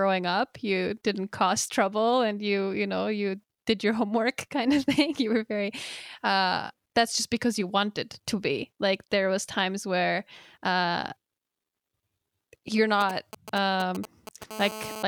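At 13.01 s, GSM signalling bursts break into the speech and run to 14.44 s. A 2G phone nearby is sending short groups of radio bursts, as it does while signalling. The audio circuit rectifies those pulses into sound. The result is a galloping dit-dit-dit of brief buzzes. Each buzz sits at about 217 Hz, the phone's burst rate. They sit roughly 10 dB below the speech.

At 14.51 s, a GSM phone buzz takes over and lasts until 15.03 s. The bursts are now continuous, repeating 217 times a second. That steady pattern points to the phone being in a call. Rectified by the audio circuit, it becomes a hard, raspy buzz at about 217 Hz. It is thick with harmonics and has nothing to do with the speech. It sits about 11 dB below the speech.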